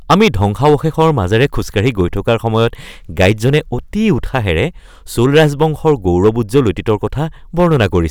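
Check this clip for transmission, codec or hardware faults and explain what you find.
One fault runs through the whole clip: hard clipping. From start to finish, the louder syllables of the speech carry a harsh, buzzy crackle, as if the peaks were torn rather than rounded. The signal drives about 11 dB past what the stage can pass, so every peak above that ceiling is sliced flat. Those squared-off tops create harmonics high above the speech, heard as fuzz. The damage hits only a small fraction of samples, around one or two percent, so quieter stretches stay clean.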